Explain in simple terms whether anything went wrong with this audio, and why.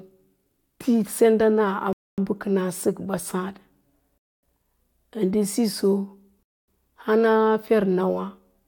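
The speech stops dead three times for a quarter of a second: a gap between chunks, at 1.93–2.18 s before "bə kəna səkɓa", at 4.18–4.43 s, and at 6.43–6.68 s after "ndə siso". The audio was handled in 2-second pieces with silence inserted at each join.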